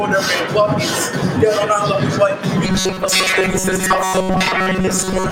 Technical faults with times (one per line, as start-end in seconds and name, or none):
0.00-5.32 noise suppressor applied to music or sounds
2.64-5.32 robotic sound from repeated short buffers